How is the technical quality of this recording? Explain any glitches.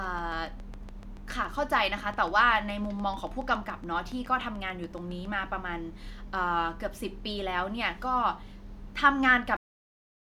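The recording has two clear technical faults, one at the start and one at the end.

Train of clicks, from 0.04 to 5.26 s: A repeating pulse gets into the signal path, likely from electrical interference from nearby equipment or a faulty connection or power supply. About forty near-identical clicks arrive at a steady 7.1 per second, each roughly as loud as the speech. They come through as an even ticking laid over the speech, and they remain audible in the pauses between phrases.

Cut-off end, at 9.57 s: The final buffers of audio were never written to the file. The speech is therefore cut off mid-sound rather than finishing or fading out. The signal does not decay naturally. It drops straight to digital silence, which lasts for the remaining three-quarters of a second of the file, so the ending sounds abrupt and truncated.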